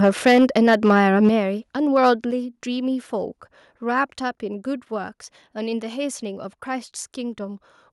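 From 0.03 to 0.92 s, and again at 1.23–1.29 s and 1.96–2.1 s, the loudest syllables crackle harshly with flattened tops, peaking about 2 to 5 dB over the limit. That's microphone overload, with input gain likely set too hot. Meanwhile, the whole level drops abruptly at 0.28, 1.29, 2.31 and 4.35 s, by about 2, 6, 4 and 2 dB. That's the microphone volume being stepped down, likely by the call software reacting to those clipped peaks.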